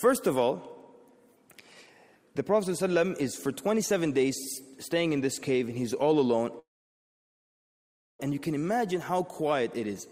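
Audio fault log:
6.59–8.20 s, call audio freeze: the sound stops and a gap of about 1.6 s opens, nearly all of it silent, with only a brief tail carried over from the last sound before it dies away. The likely cause is packets stalling in transit so the jitter buffer runs dry. When delivery resumes, the audio picks up exactly where it stopped, so nothing is lost but everything after arrives about 1.6 s later.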